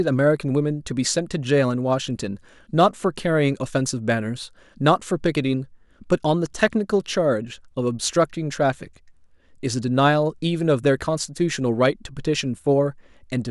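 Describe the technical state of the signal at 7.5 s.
At 7.5 s the speech signal is intact, with no audible technical fault at that moment.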